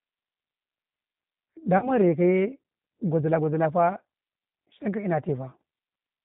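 A speech recording that sounds narrow, slightly rough and synthetic from start to finish, with nothing above 4 kHz. This is G.729 codec damage. The codec rebuilds each 10 ms frame from a vocal-tract filter, a pitch predictor and a few pulses, which fits an 8 kbit/s G.729A stream. From 1.78 to 1.91 s the speech smears into a fading buzzy tone or coloured noise and stays weak or distorted after it. This is VoIP packet loss concealed by the speech codec. About 40 ms of audio went missing, which fits two lost 20 ms packets. The decoder extrapolated from its last pitch and filter and took time to recover.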